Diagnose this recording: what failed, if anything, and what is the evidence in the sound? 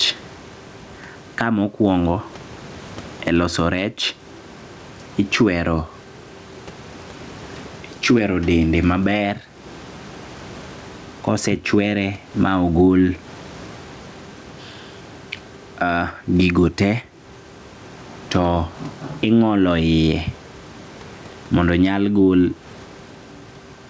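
Gain pumping at the input gain stage: the gain swings some 15 dB with loud syllables throughout. The waveform looks squashed flat, likely from excess gain feeding a fast limiter.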